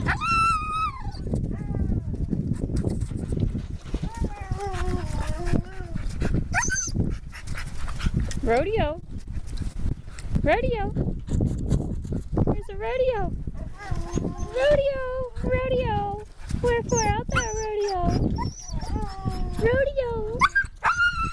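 From 8.93 to 10.05 s the sound turns choppy and robotic, with a rapid run of short holes, none longer than 27 ms. This is repeated packet loss (robotic sound): packets kept arriving late or not at all, and each hole was covered by stretching out the audio just before it. About 100 ms of the real signal is missing, roughly a tenth of that stretch.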